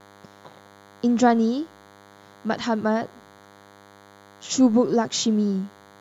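Throughout the speech runs a DECT cordless phone buzz: radio bursts every 10 ms, rectified into a thin, harmonic-rich 100 Hz rasp well below the voice, unlike smooth mains hum.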